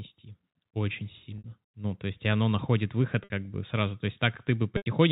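A brief held, buzzy sustain appears at 1.38 s and again at 3.24 s, between "есть и оно находит" and "бы сразу", each lasting 60 ms. At 4.77 s a 90 ms gap fades toward silence before the sound cross-fades back. This is packet loss with pitch repetition, where the receiver loops the last pitch period to fill the missing audio.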